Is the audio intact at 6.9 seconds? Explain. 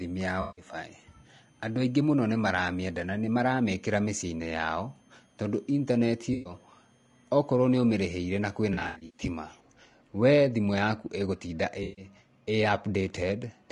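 No. A switching supply whistle runs from 0.0 to 9.6 s, ending just before "we thimũ yaku ĩgũtinda": a power supply's switching, in an audible burst mode or beating with another supply, leaks a faint, wandering tone between 3.1 and 3.3 kHz. Throughout, including this moment, the speech is plainly rough and grainy with noisy gaps between harmonics, likely from low-delay AAC compression (AAC-ELD), which fits a bitrate around 32 kbps.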